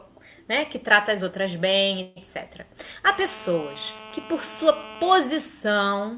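The audio comes through a narrowband call path, with nothing above 4 kHz, which fits a G.711 telephone codec, and it has two faults. From 2.02 to 2.18 s there is a call audio freeze: the last sound is stretched into a fading tail for about 140 ms, then the audio resumes exactly where it left off, so nothing is lost but everything after it is pushed later. The likely cause is packets held up in transit until the jitter buffer ran dry. On a spectrogram this appears as a short smeared, decaying band, and on the waveform as a repetitive tapering stretch with no true dropout. From 3.07 to 5.19 s a GSM phone buzz sits underneath, about 18 dB below the signal. This is a hard, raspy 217 Hz drone, steady throughout as from a phone on an active call, caused by the audio circuitry rectifying the handset's radio bursts. A spectrogram shows a comb of evenly spaced horizontal harmonic lines at multiples of 217 Hz up to the 4 kHz ceiling, unrelated to the content. 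The waveform carries a regular pulse train riding on the signal.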